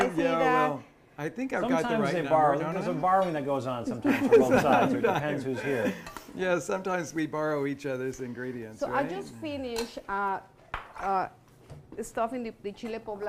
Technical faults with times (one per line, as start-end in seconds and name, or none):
8.20 repeated buffer